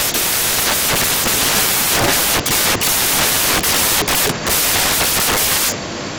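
A speech recording, with samples built from the wrong bytes throughout: misassembled low bits swamp each value, giving loud, harsh broadband noise that is close to white on louder passages and a flat full-band spectrogram.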